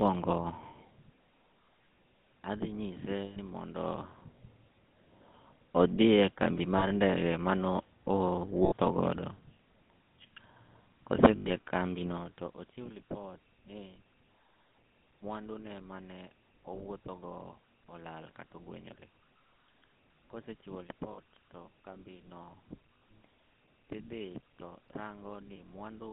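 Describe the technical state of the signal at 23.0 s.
Lost GSM frames occur from 22.98 to 23.02 s, a gap of 40 ms that matches two consecutive 20 ms frames going missing. The decoder bridges the hole by reusing the filter and excitation settings from the last good frame, playing them again. The result is a brief rough, metallic ring in place of the real signal. The gap is far too short for that substitute to fade fully to silence.

Underlying this moment is the GSM full-rate codec, present across the whole clip. The speech passes through a narrow line band of roughly 150 Hz to 3.6 kHz, which fits the 13 kbps full-rate scheme. The codec rebuilds the voice from a vocal-tract model excited by regularly spaced pulses and keeps only a third of the excitation samples. That thinned excitation gives the voice a plainly audible buzzy, gravelly roughness, with nothing above 3.6 kHz.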